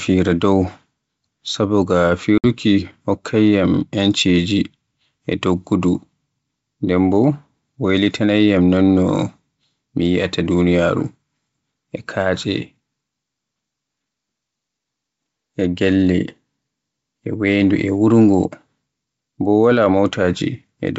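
At 2.38 s the speech drops into a hard-edged silent hole of about 60 ms, a few packets' worth. That's packet loss on an ADPCM call. The G.722 decoder's predictor and step size lose track of the sender's, so the audio comes back slightly distorted before settling.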